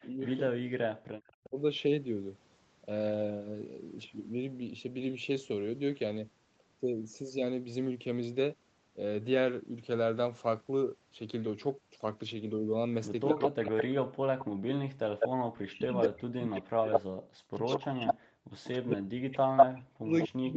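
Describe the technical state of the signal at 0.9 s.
At 0.9 s a faint copy of the speech trails about 0.24 s behind; this is an echo leak between 0.01 and 1.32 s, likely an echo canceller passing loudspeaker pickup back. Overlapping it, from 0.14 to 1.55 s, the speech drops out in pieces by a very deep margin, likely speech suppressed in double talk as the canceller attenuated both sides together.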